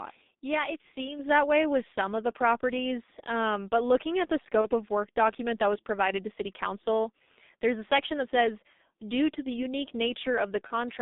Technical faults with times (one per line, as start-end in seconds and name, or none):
0.00-11.01 G.723.1 codec
1.19-11.01 sudden gain jump
4.61-4.68 VoIP packet loss concealed by the speech codec
10.67-10.71 VoIP packet loss concealed by the speech codec